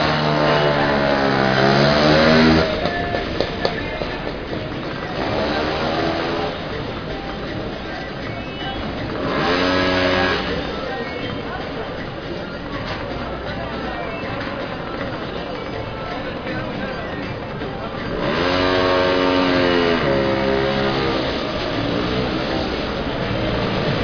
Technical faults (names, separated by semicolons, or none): none